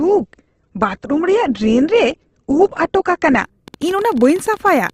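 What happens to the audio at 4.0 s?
A train of clicks runs from 3.68 to 4.91 s, about 17 per second at an uneven pace, some twenty pulses peaking near the speech level. It is likely interference or a faulty connection or power supply injecting repeated pulses, heard as popping over the speech.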